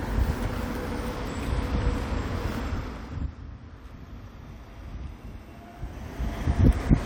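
Zipper noise runs from 2.60 to 3.44 s as the level falls roughly 15 dB in about 2 dB steps, then from 5.76 to 6.78 s as it rises in about 1 dB steps, around ten unsmoothed steps a second. It ticks audibly. The waveform envelope forms a staircase, and a spectrogram shows faint vertical broadband lines at each step.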